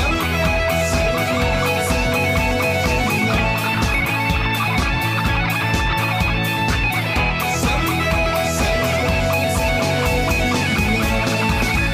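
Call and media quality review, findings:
No audible faults found in this clip. Nothing to escalate from the listening pass.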